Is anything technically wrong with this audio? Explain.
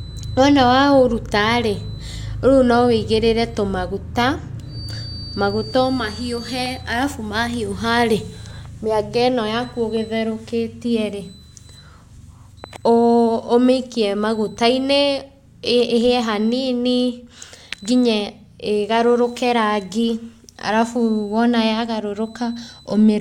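Yes. From 4.64 to 6.85 s a feedback whistle runs under the speech: a thin 4.6 kHz tone about 20 dB down that swells and fades slowly in level. The likely cause is a loudspeaker-to-microphone loop held right at the edge of oscillation. A spectrogram shows one narrow horizontal line at 4.6 kHz.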